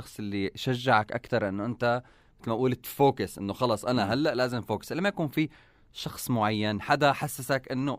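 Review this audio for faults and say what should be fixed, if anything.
No faults can be heard anywhere in the speech. Nothing here needs fixing.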